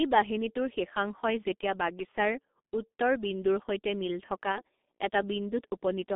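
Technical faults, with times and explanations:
Throughout: G.723.1 codec. The speech sounds muffled and hoarse, with consonants smeared and the low end thin. Nothing survives below about 200 Hz or above about 3.6 kHz, so sibilants and breath lose their edge. The heavy grain fits a very low-rate telephony coder running around 6.3 kbit/s. It models the voice in coarse 30 ms blocks and updates that model too slowly to follow quick articulatory changes, so fine detail is lost.
4.52 to 4.62 s: VoIP packet loss concealed by the speech codec. For roughly a tenth of a second the voice turns briefly buzzy or noisy and smeared, dipping in level before recovering. This fits a single missing 30 ms frame. The decoder filled the gap by repeating its last pitch and spectral shape at falling gain. Because each following frame is rebuilt from that guessed state, the distortion lingers after the gap itself ends.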